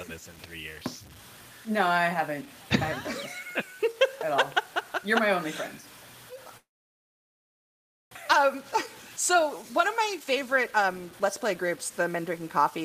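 From the start and through the whole clip runs a coarse, grainy distortion that rises and falls with the sound and turns quiet passages gritty, with the faintest parts sputtering or cutting to silence. This points to low bit depth without dither, likely around 7 bits with plain truncation, leaving an error floor about 25 dB below the signal. Unlike steady hiss, this noise tracks the material and vanishes when the sound stops, because the rounding error comes from the signal itself.

At 6.57 s the audio breaks off in a long network dropout lasting until 8.17 s. A brief continuation of the last sound fades away, and then nearly 1.5 s of silence follows. When the audio returns, about a second of material is missing rather than delayed. That gap is the likely cause: packets never arrived and the receiver concealed the hole. A short glitch or click would leave the timeline intact, but here the sound resumes further along.

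From 8.24 s to 12.39 s the audio plays noticeably hurried, at about 113% speed with its pitch unchanged. This is jitter buffer speed-up. After the dropout the receiver held roughly half a second too much audio, so it repeatedly cut out short pitch-period pieces to catch up, removing about half a second in total. Because pitch stays put, this differs from a resampling or clock error, which would raise the pitch along with the tempo.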